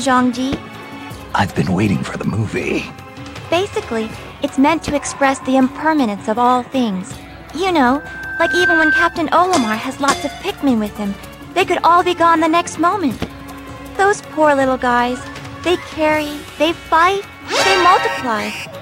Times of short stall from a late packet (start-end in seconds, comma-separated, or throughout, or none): none